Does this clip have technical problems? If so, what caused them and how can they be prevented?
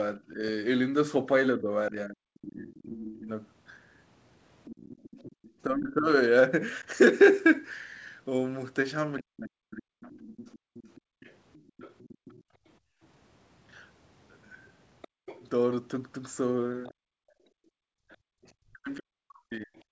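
Yes. Speech is suppressed in double talk from 0.17 to 6.1 s, 9.2 to 10.09 s, around 15.1 s, and 18.66 to 19.7 s. The voice dips by as much as roughly 40 dB, likely because the echo canceller couldn't separate it from loudspeaker echo. Better double-talk detection, or a headset, would prevent this.

The other side's voice leaks through from 2.75 to 5.51 s at about 20 dB below the speech, and from 9.18 s to the end at about 25 dB below. That's likely leftover loudspeaker echo the canceller didn't remove. Lower speaker volume or headphones would fix it.

The background is gated by the echo canceller from 10.59 to 13.01 s and from 16.94 s to the end, with the room sound dropping by about 38 to 40 dB while the loudspeaker plays. Gentler suppression settings would stop the room tone from dropping out.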